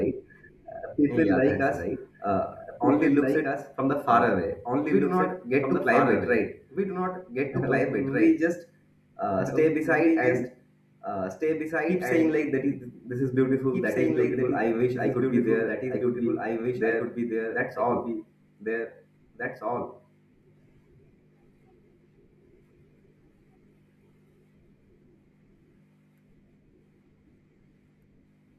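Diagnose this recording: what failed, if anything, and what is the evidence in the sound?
A doubled audio track runs throughout: a second, full-band copy of the speech trails the original by about two seconds at roughly 5 dB lower, with no decay or room colour. On a spectrogram, every pattern reappears intact and shifted right, likely from a duplicate capture path or misaligned edit.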